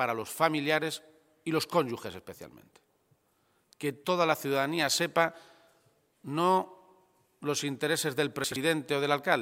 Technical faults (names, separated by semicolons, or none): chunks out of order